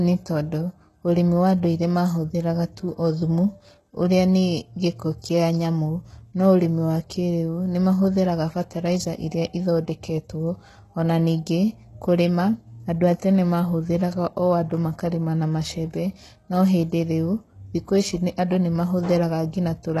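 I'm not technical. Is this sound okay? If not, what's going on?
No. The speech has plainly audible damage from start to finish. It sounds like likely HE-AAC compression. The top end is rebuilt from lower sounds, so s sounds come out gritty or lispy. Nothing is heard above about 12.3 kHz.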